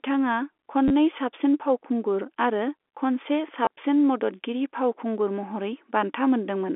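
Telephone-band speech, carried cleanly over G.711, has two brief robotic stutters from packet loss with the last packet repeated: 30 ms at 0.88 s and 20 ms just after "फावखुंगुर आरो खनसे" at 3.65 s. Unlike a silent dropout, the gap is filled with buzzy repeats, which fits 10 ms packets.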